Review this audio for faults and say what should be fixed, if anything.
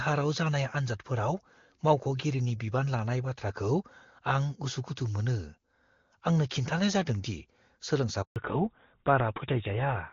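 Handover gap at 8.22 to 8.36 s: the sound drops out within a few tens of milliseconds and stays silent for 140 ms. The call was being passed from one network link to another, and no speech frames reached the receiver during the switch, so whatever was said in that window is gone and the decoder had nothing to play. To prevent it, the network should prepare the target link before releasing the old one so that frames keep flowing through the switch.

Fallback to narrowband from 8.36 s to the end: when the audio returns after the gap, everything above 4 kHz is missing, and the voice sounds duller and rougher than before. Before the gap, the full wideband range sounds consistent with high-rate HD Voice. The call dropped to an older narrowband codec that fits GSM full rate. To prevent it, the call should be kept on networks that support HD Voice end to end, or codec negotiation should keep wideband after a handover.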